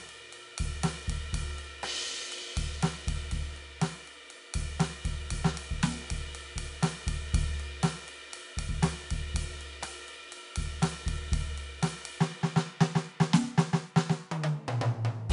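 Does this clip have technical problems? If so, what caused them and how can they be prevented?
Yes. The music carries 4-bit ADPCM compression from start to finish, and the damage is plainly audible. Each sample is coded as a coarse 4-bit step from a running prediction, so a grainy hiss rides on top of the music, swelling on loud passages and sinking on quiet ones. Nothing comes through above 10.6 kHz, which dulls the top end and points to a low sample rate, around 22 kHz, at a rate of about 88 kbps. To prevent it, keep the master as PCM or a modern perceptual codec at a decent bitrate and full sample rate.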